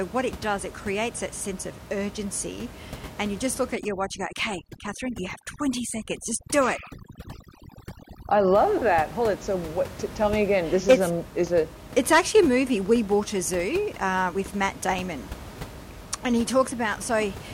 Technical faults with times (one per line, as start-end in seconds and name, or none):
3.75-8.58 overdone noise removal